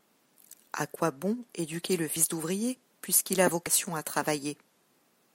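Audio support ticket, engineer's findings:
Compressed frames skipped at 2.16 s and 3.66 s: the speech jumps ahead by around 70 ms each, which fits a couple of dropped 32 ms codec frames. Check the decoder and file integrity.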